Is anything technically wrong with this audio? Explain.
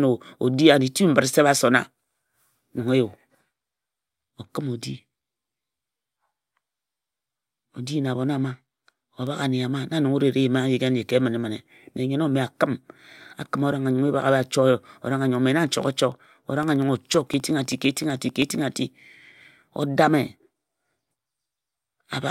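Yes, there are periodic USB or driver dropouts in this speech from about 16.12 to 18.61 s. Every 64 ms something stalls the USB bus or driver, and roughly half a millisecond of audio gets swapped for silence, about forty times. You hear a steady ticking riding on the signal.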